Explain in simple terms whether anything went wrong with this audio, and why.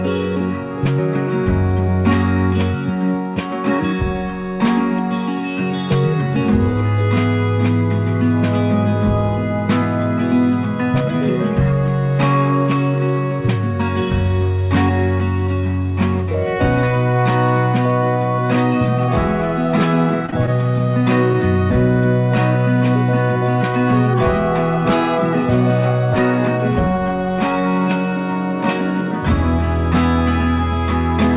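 Between 20.26 and 20.81 s, the call connection kept dropping small chunks of audio. That is repeated packet loss: five short gaps, the longest 20 ms. Each hole was patched by stretching the sound just before it, so that half-second turns choppy.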